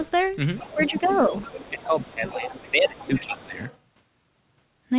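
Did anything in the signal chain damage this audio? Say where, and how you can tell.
Yes, in call processing. The other side's voice leaks through at 0.0–0.11, 0.56–2.06, 2.26–2.4, 2.58–2.71, 2.88–3.2 and 3.68–3.77 s, roughly 15–35 dB below the speech. This is likely residual echo the canceller missed, and it shows on a spectrogram as a second, weaker harmonic pattern.

Speech is suppressed in double talk at 0.74–1.33 s and 1.7–3.59 s, dipping about 10 dB and 15 dB respectively. This is likely the canceller attenuating the near talker along with the echo, and the waveform envelope sags there.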